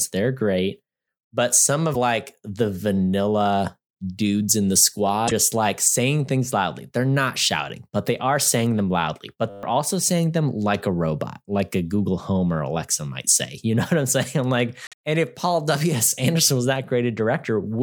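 At 1.93 s, just before "like the vanilla dudes", the speech jumps ahead with a brief glitch lasting about 30 ms. The same skip-and-glitch happens at 5.27 s, lasting about 50 ms, and at 14.87 s, between "I'm like" and "and if", lasting about 60 ms. The likely cause is a broken MP3 bit reservoir: after frames of roughly 24 ms each were dropped, the following frames borrowed data from the wrong bytes and decoded wrongly.

From 9.50 to 9.63 s, just before "also saying them like", a 10 ms slice of audio repeats exactly 13 times. This is a system hang loop, where the output kept replaying one stuck buffer while the system stalled. At 100 repetitions per second the loop is heard as a steady buzz rather than a stutter. Roughly 0.15 s of the speech that should have played there is lost.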